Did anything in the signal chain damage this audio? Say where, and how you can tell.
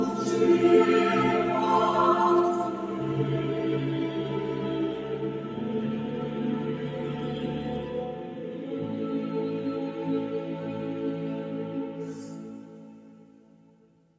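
Yes. The damage is in the call processing stage: a noise suppressor made for speech, applied here to non-speech sound, stays active for the whole clip. Sustained material and decaying tails keep getting pulled down by a swing of around 5 dB, while onsets pass largely intact, so the level pumps and the sound thins between attacks. On a waveform the envelope dips just after each attack. A spectrogram shows held partials fading in patches, all within the normal 8 kHz band limit of call audio.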